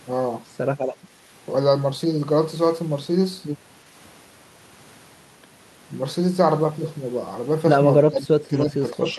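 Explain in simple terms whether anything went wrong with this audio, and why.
The echo canceller likely got confused when both sides talked at once and turned the voice down along with the echo. This is speech suppressed in double talk: from 8.09 s to the end at 9.18 s, the voice becomes much quieter.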